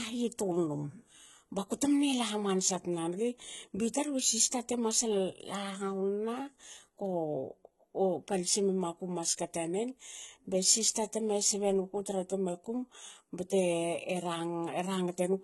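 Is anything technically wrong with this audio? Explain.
Yes. Throughout, the speech was likely passed through HE-AAC compression at a bitrate consistent with 16 kbps. Only the lower spectrum is coded, and the treble is rebuilt from copied lower bands, so harmonics clash across the crossover. The damage is heavy: s sounds turn gritty, metallic or lispy, and nothing remains above 11.8 kHz.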